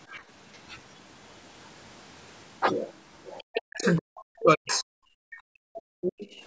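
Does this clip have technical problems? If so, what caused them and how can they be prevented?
Yes. The other side's voice leaks through at 0.53–0.59, 3.38–3.61, 3.81–3.85, 4.39–4.43 and 4.67–4.83 s. These scraps range from very faint to clearly audible. The likely cause is loudspeaker echo that the echo canceller left behind. Headphones or better echo cancellation would prevent it.

Speech is suppressed in double talk from 3.57 to 4.87 s and from 5.08 to 6.26 s. The voice drops deeply, by about 40 dB, for roughly a second each time. Both sides were likely talking at once, so the canceller turned everything down. Headphones would keep echo out of the microphone and avoid this.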